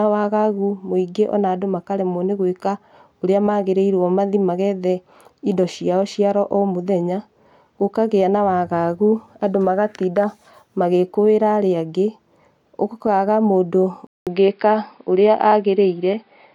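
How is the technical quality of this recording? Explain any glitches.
The recording has one fault. At 14.07 s, likely an input switched to a poorer device, the audio drops out for 0.2 s, then returns narrowed, with nothing above 5.2 kHz, duller and boxier, faint new background noise, level roughly unchanged, through to the end.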